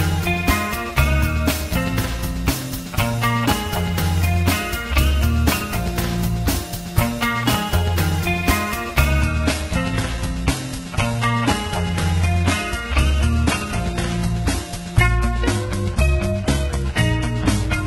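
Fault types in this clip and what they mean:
Adaptive stream at a lower bitrate: from 9.21 s the stream switches abruptly, with no gap, to a leaner version. Treble stops near 11.8 kHz.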